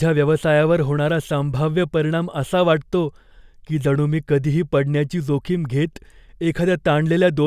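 Nothing goes wrong anywhere in this bit of speech, so there's no fault to point to at any moment.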